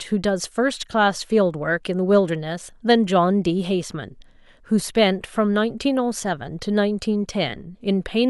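No faults detected anywhere in the speech.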